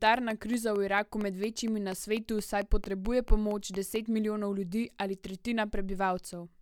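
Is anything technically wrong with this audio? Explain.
Yes. From 0.07 to 3.97 s, a train of about twenty regularly spaced clicks (4.4 per second) peaks about 5 dB above the speech, likely from nearby equipment interference or a faulty connection or power supply.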